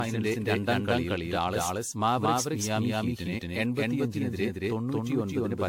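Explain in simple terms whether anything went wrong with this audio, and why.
Two things went wrong, and both last for the whole recording.

The first is a doubled audio track. Every sound is followed by a second copy of itself about a fifth of a second later, roughly as loud as the first. The echo is clean, with no room sound around it. This is likely because the same audio reached the final mix twice, once through a slower route that lagged behind.

The second is generation loss. The speech sounds swirly, hollow and smeared, and the starts of sounds are blurred instead of crisp. There is also nothing above about 18.6 kHz, so the very top of the sound is missing. The likely cause is that the recording was compressed with AAC and then decompressed and compressed again about fifteen times. Each round adds a little more damage, and that damage builds up.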